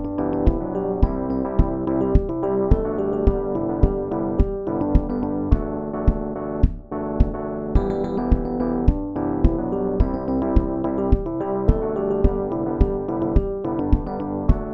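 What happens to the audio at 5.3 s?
At 5.3 s you're hearing overlap-add ripple, and it isn't a one-off: it runs through the whole clip, so that moment just catches it mid-flow. The audio was split into windowed frames and stitched back with an overlap that doesn't add up to a steady gain, so the level dips and swells by about 11 dB once per frame, somewhere around 200 times a second. That comes across as a metallic buzz with extra tones around each note.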